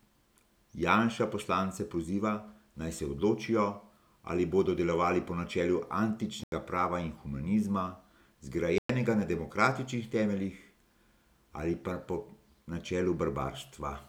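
Bluetooth stalls at 6.44 s and 8.78 s cut the speech to silence for 87 ms and 111 ms before it resumes on "prava in humanizma" and "na demokratičnih temeljih". The likely cause is interference delaying packets until the headphones' buffer emptied and playback waited for resent data.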